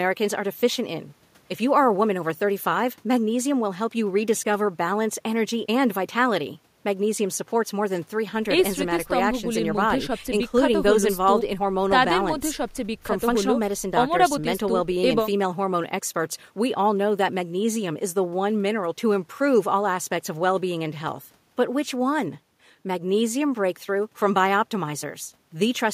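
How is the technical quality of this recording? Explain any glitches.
I hear no glitches or technical faults here.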